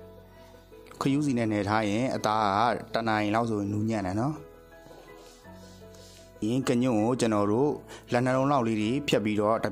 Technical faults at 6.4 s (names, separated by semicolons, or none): stream segment skipped